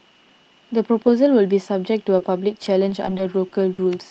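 Speech with repeated packet loss (robotic sound) from 2.18 to 3.79 s: a string of short gaps, the longest 50 ms, each patched by stretching the preceding sound. Unlike a single dropout, the choppiness recurs throughout that stretch.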